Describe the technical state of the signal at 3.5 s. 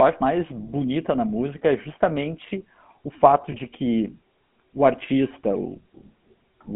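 At 3.5 s the signal passes through the GSM full-rate codec, which rebuilds the sound from a vocal-tract model driven by sparse, regularly spaced pulses. It is band-limited to roughly 150 Hz to 3.4 kHz and carries plainly audible buzzy, gravelly roughness consistent with 13 kbps coding.

From 3.52 to 3.55 s there are lost GSM frames. A dropout that fits a single 20 ms frame was concealed by repeating the last good frame's parameters, so the sound briefly holds with a rough, metallic ring before normal decoding resumes.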